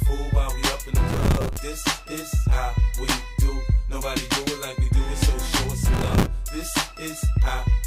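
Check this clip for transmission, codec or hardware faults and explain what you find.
Two bursts of processor overload crackle, from 1.09 to 1.57 s and 5.94 to 6.27 s. Dozens of buffers of around 5 ms miss their deadline and replay stale audio with hard edges, heard as gritty tearing.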